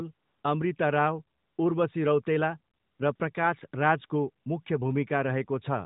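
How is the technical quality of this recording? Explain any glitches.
The recording has audible background dropouts. It comes through a narrowband mobile link, lightly coded, with nothing above 4 kHz. AMR comfort noise occurs at 0.14 to 0.44 s, 1.38 to 1.58 s, 2.74 to 3.00 s and 3.16 to 3.20 s. The phone judged these pauses silent and sent no speech frames. The receiver filled them with synthetic noise built from a rough level and spectrum. The real background becomes a smooth, steady hiss that switches in and out.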